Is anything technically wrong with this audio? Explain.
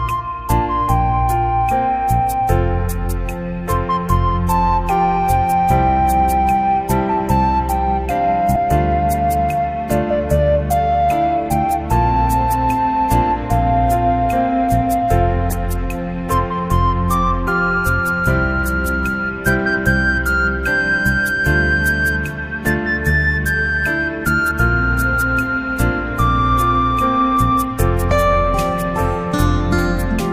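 Yes. At 8.55, 17.46 and 24.50 s the audio jumps forward with a short smeared blip: compressed frames skipped. About 200, 50 and 70 ms go missing, consistent with whole 23.2 ms frames dropped.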